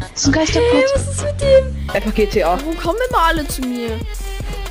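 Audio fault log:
1.78–4.70 s: imaging from sample-and-hold upsampling. Unsmoothed repeated samples leave mirror images at 12–24 kHz, about 23 dB down. This is heard as bright metallic fizz, fitting a 24 kHz source raised to 44.1 kHz.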